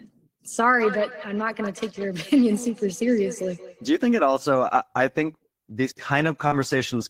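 It's a speech recording with two problems. From 0.79 to 4.11 s there's a feedback echo between two devices: everything comes back at a steady interval of roughly a fifth of a second, thinner and more ringing than the original, peaking at about 13 dB below the speech. That's what you get when two devices in the same room are on one call. One plays out what the other's mic sent, that mic hears it again, and neither echo canceller catches it because each only cancels its own playback. Then at 6.47 to 6.55 s there's a short concealed packet loss. About 40 ms of audio didn't reach the decoder in time, so the receiver patched roughly 41 ms by stretching the preceding sound and crossfading back into the real signal. You hear it as a quick smear or wobble right there.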